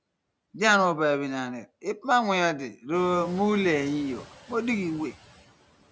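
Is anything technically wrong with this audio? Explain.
Yes. Noise suppressor artifacts run through the whole speech clip. Frame by frame, the suppressor pulls down every band it judges to be steady background, by about 17 dB, so the noise dips between phrases and swells back under the speech. That pumping is most audible after the room noise rises by about 19 dB around the 3-second mark, settling about 20 dB below the speech. A noise gate would instead cut the noise in hard on-off steps. The call's microphone processing is also audible as a band limit, with nothing above 8 kHz.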